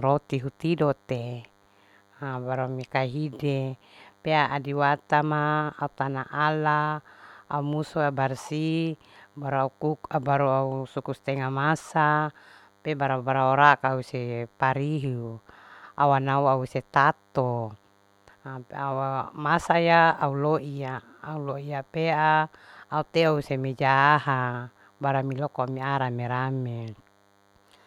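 A thin, steady 100 Hz buzz rich in harmonics sits far beneath the speech throughout: DECT cordless phone buzz, from a nearby handset's radio bursts rectified in the audio circuitry.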